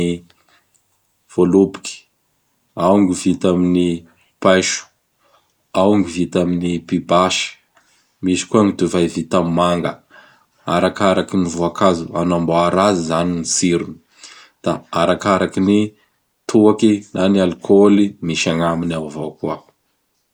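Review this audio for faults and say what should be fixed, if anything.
Nothing here needs fixing; no faults were found.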